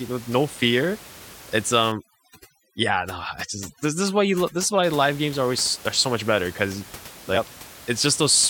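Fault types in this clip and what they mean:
Overdone noise removal: from about 1.92 s to 4.84 s, ending just before "live games are always", a noise reducer set too strong cuts individual frequency bands whenever they sit near its noise estimate. The room noise, about 19 dB below the speech elsewhere, breaks into twinkling, warbling specks, and quiet parts of the speech vanish with it. A spectrogram shows the background as scattered isolated dots with empty gaps, and the waveform's floor between syllables drops.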